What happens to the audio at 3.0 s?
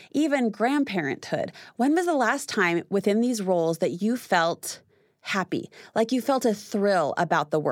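Nothing goes wrong at 3.0 s: the speech carries on intact through that moment, with no dropout, click or other fault to be heard.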